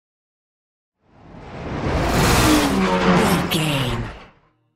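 No technical faults are audible anywhere in the clip.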